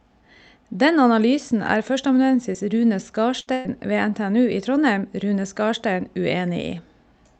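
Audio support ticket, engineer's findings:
Lost packet rebuilt from error correction: brief rough, noisy patches at 2.39–2.41 s (just after "analysen er"), 2.54–2.56 s, 3.06–3.08 s and 3.65–3.67 s. Each is 20 ms with no gap. The receiving Opus decoder played the low-bitrate copy carried in the next packet, so those frames come out coarser.

Short concealed packet loss: short smear or wobble at 2.53–2.56 s. About 20 ms never arrived in time. The decoder extended the preceding sound for about 11 ms and blended back into real audio. This overlaps the rebuilt frame at 2.54 s.

Burst of packet loss: held, fading buzz or hiss at 3.40–3.49 s and 3.53–3.67 s, then a jump ahead. About 60 ms and 120 ms of audio are missing. The jitter buffer and decoder continued the last sound while attenuating it, with no full silence in the second burst. The second burst ends in a rebuilt frame at 3.65 s. The Opus call path caps content near 8 kHz.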